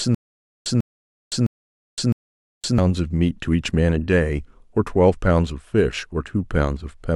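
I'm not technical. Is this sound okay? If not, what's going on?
No. From the very start to 2.78 s there's a stutter with silent gaps: the same 0.15-second speech snippet repeats four times, each followed by half a second of silence. Unlike a simple dropout, the snippet repeats, which likely means the playback stalled.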